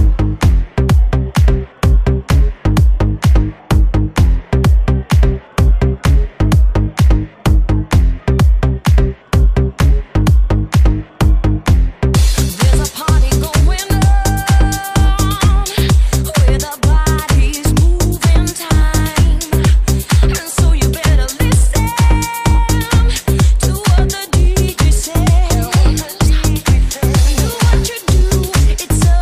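No technical fault can be heard anywhere in the audio, and the signal holds steady and intact throughout.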